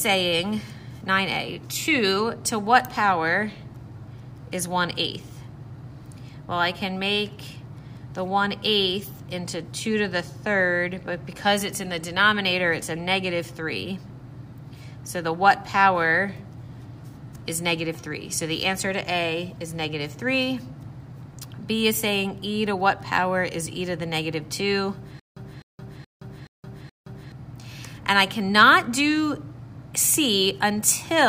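From 25.20 to 27.32 s, a stutter with silent gaps: a 255 ms burst repeats five times, separated by 169 ms of flat digital silence, likely a stalled stream retrying.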